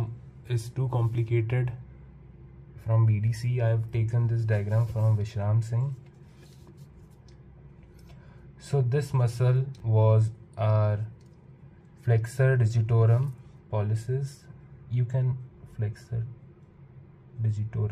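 A brief jumble at 9.78 to 9.80 s comes from chunks out of order: one 10 ms chunk arrived a chunk late and plays after its successor, leaving hard joins. Unlike a dropout, no audio is missing and there is no silent gap, just swapped sound.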